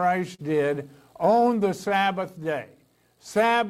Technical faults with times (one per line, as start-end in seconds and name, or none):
0.00-3.70 clock drift between sender and receiver
0.35-0.41 short stall from a late packet